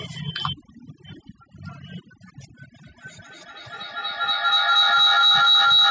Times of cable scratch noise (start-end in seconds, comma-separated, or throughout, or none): none